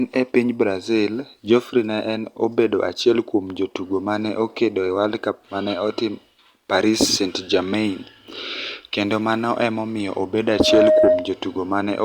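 Speech recording with loudspeaker feedback squeal from 10.48 to 11.40 s: a 623 Hz tone swells within about a third of a second to roughly 10 dB above the speech.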